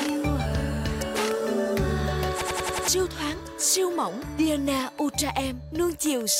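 From 2.42 s to 2.88 s there is a system hang loop. The host or its audio driver stopped supplying new data, and the hardware kept replaying the last ring buffer. A segment of about 93 ms, which fits a 4096-sample buffer, repeats exactly five times at 10.8 Hz. It is heard as a rapid machine-gun stutter rather than a buzz. When playback resumes, roughly half a second of the original audio is missing.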